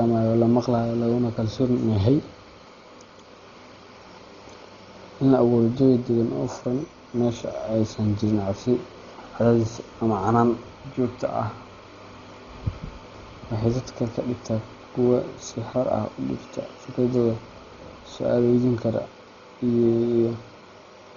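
From start to finish the speech is dull and heavily damaged, with nothing above 7 kHz and a rough, fluttering noise clinging around voiced tones. This is likely Dolby Digital compression at a very low bitrate, around 32 kbps judging by the damage. The encoder narrowed the band and left many frequency lines without mantissa bits, so the decoder filled them with dither noise. That noise fill is what separates it from a simple low-pass filter, which would sound dull but clean.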